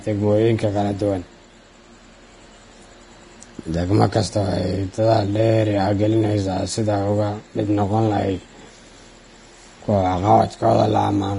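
Throughout the speech, the treble stops dead at about 10.6 kHz and what remains beneath is hissy and grainy, with smeared consonant attacks. That is likely heavy Vorbis compression near 30 kbps. Unlike a plain low-pass, detail turns into noise-like grain rather than simply vanishing.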